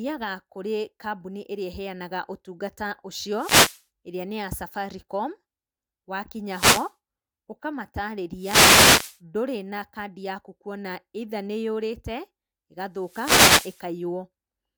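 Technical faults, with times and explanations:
3.33–3.84 s (just before "ĩrĩa nĩ ya"), 6.48–6.92 s, 8.36–9.19 s (just before "ndũrĩ na kandi yaku") and 12.98–13.88 s: wireless microphone noise hit. Cancelling reflections fade the FM radio signal, so receiver static swishes over the voice. This shows as broadband vertical smears on the spectrogram and hashy waveform patches.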